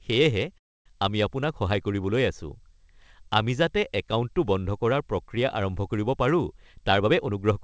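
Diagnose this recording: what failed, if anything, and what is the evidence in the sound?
At 0.58 to 0.88 s the speech stops. A brief smeared continuation fades into about 260 ms of silence, and then the speech resumes with nothing lost. This points to a call audio freeze at the network and jitter-buffer stage, likely caused by delayed packets draining the buffer. On a waveform this appears as a flat gap. The spectrogram shows a blank vertical band.

From 6.62 to 7.61 s the speech runs about 15% fast at unchanged pitch. This is a jitter buffer speed-up in call processing. The receiver repeatedly cut out pitch-period slices, roughly 150 ms in total, to shrink the built-up delay. On a spectrogram the harmonics stay level while syllables compress in time. The band-limit at 8 kHz is consistent with G.722.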